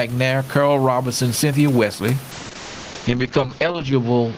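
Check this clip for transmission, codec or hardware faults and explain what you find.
Two faults are present: pumping gain throughout the speech, and a bitrate drop over the last two seconds.

Gain pumping, throughout: gain is likely set far too high, so a fast limiter clamps every loud syllable. The room noise sits about 30 dB below the speech, and the gain swings by around 15 dB.

Call bitrate drop, from 2.32 s to the end: the bandwidth estimate fell, and the encoder switched to a much leaner rate. The sound turns coarse and watery, with a cutoff falling from 20 kHz to 8 kHz. This fits a fall from roughly 32 to 7 kbps, with the low point lasting about 1.6 s.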